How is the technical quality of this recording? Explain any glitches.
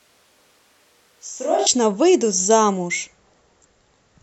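The recording has one clear fault at the very beginning.

Switch to a distant microphone, from the start to 1.66 s: the sound is already roomy and hollow when the clip opens, thin in the bass, about 10 dB quieter, with a room-noise floor roughly 35 dB below the speech. The likely cause is that the close microphone's signal dropped out or wasn't used, so a microphone further away captured more of the room. At 1.66 s the close, fuller sound returns abruptly.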